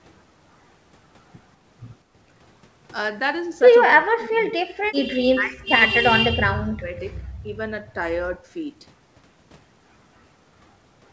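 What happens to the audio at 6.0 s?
From 5.91 to 6.04 s the speech suddenly sinks by something like 40 dB, nearly to silence, then returns. That's speech suppressed in double talk: with both ends talking, the echo canceller likely couldn't tell the talker from echo and ducked everything.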